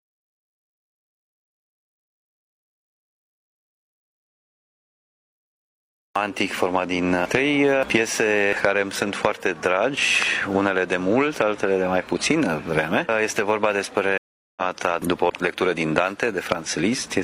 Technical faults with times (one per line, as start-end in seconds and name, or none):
0.00-6.16 audio dropout to silence
14.18-14.62 stream reconnect